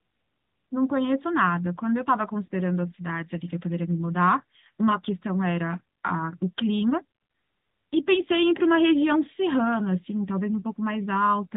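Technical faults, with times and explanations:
Throughout: AMR narrowband mobile codec. Nothing above 4 kHz comes through, so the speech sounds boxed-in and telephone-like, and the codec damage is plainly audible as a buzzy, synthetic edge. The coder rebuilds each 20 ms frame from a vocal-tract model excited by a few pulses rather than the actual waveform. At a middle bitrate, which fits a mode of about 10.2 kbps, those pulses only roughly match the real sound, and that mismatch is what produces the artificial texture.
2.46 to 2.48 s: lost AMR speech frames. About 20 ms of sound drops into a brief dip or warble, which fits a single frame that failed its checksum after a radio error. The decoder covered the gap by reusing the last good pitch and vocal-tract settings at reduced gain. Because the gap is only one frame long, the sound neither stretches out nor fades to silence, but it comes back weak or rough for a moment before recovering.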